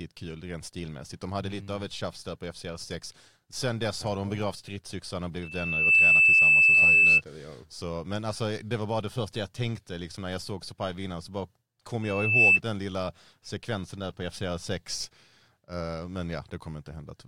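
Loudspeaker feedback squeal swells after "de begravt stridsyxan och" (5.43–7.22 s), then after "vinna så bara kom" (12.02–12.60 s), ending before "den lilla sekvensen där". The mic-to-speaker loop runs away at 2.6 kHz, building over roughly half a second to about 15 dB above the speech. A spectrogram shows a bright horizontal line; the waveform swells into a dense envelope.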